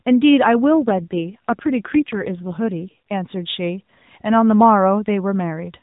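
From 0.79 s to 3.14 s the speech turns rougher and more synthetic, with no gap and no change in bandwidth, then clears. This is an AMR rate drop, which fits the codec stepping down from 12.2 to about 5.9 kbps under a weak link, within narrowband mobile audio capped at 4 kHz.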